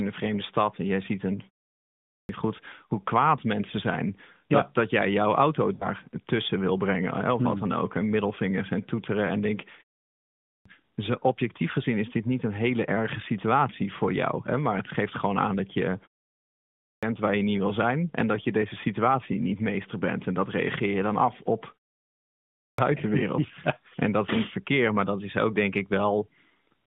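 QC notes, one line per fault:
1.78 s, 10.11 s, 16.43 s, 22.25 s: clipped start after a pause. After pauses of 0.36 to 0.55 s, the sleeping output device swallows about 0.51 to 0.60 s of onset (at 1.78 s after "en jij ziet een", at 16.43 s after "gewoon aan dat je"). Speech jumps in abruptly, unlike muted pauses, which lose nothing.
5.74–5.88 s: lost AMR speech frames. After "dat jij jouw auto", about 60 ms is concealed, which fits three 20 ms frames. The decoder repeats the last pitch with falling gain, so the sound smears and dims before "tussen wil" returns weakly. The loss falls mid-speech, not after a pause.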